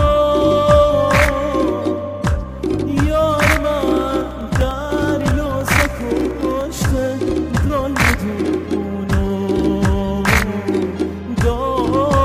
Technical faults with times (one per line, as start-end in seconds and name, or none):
3.81-6.61 periodic USB or driver dropouts
7.67-7.71 short concealed packet loss